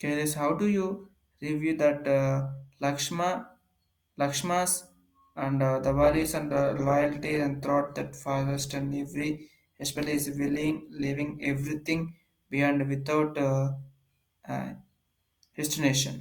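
An adaptive stream at a lower bitrate runs from 6.02 s to 12.02 s, starting right after "and uh the". For six seconds the player switched to a leaner encoding, most likely because the connection slowed, and the speech takes on more audible codec artefacts. The drop and the recovery are both abrupt, with no gap in the audio, and the contrast fits a shift from roughly 64 kbit/s Opus down to about 16 kbit/s.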